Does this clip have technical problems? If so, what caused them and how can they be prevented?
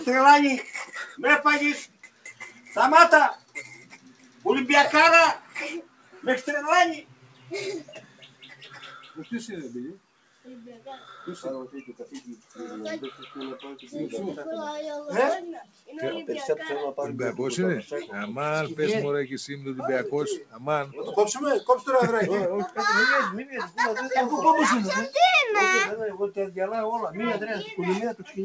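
Yes. A speech noise suppressor was left running on this audio, throughout the clip. It treats steady, sustained material and ambience as noise and keeps shifting its gain by around 10 dB, so held sound and tails pump and thin out while sharp onsets pass largely intact. A compressor follows overall loudness, but this suppressor reacts to how steady the sound is. Quiet, sustained passages dip even when the level hasn't risen. To prevent it, switch off noise suppression or use a music mode whenever the source isn't speech.

The noise suppressor also cut specific stretches of sound, at 1.87–4.45 s, 5.4–10.86 s, 11.89–12.58 s, 15.64–15.89 s, 20.43–20.64 s, 22.69–23.78 s and 28.14–28.37 s. Here it judged the sound to be noise and pulled it down by about 10 to 11 dB at the deepest. The 5.4–10.86 s stretch loses roughly three seconds in total. Unlike a network dropout, the sound never vanishes or stutters. 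It sinks and its decay is shortened. The same prevention applies: keep speech-oriented suppression off non-speech sources.

The bandwidth stopping at 8 kHz comes from the G.722 call path at 64 kbps, which is expected behaviour for that codec.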